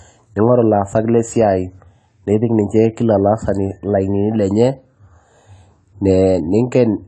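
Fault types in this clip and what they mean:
AAC compression: Throughout, the speech sounds dull and smeared, with nothing above 11.4 kHz and a plainly audible fizzy, warbling texture on sibilants. The likely cause is low-rate AAC-LC coding, fitting about 32 kbps, which drops the top band and coarsely quantises the rest.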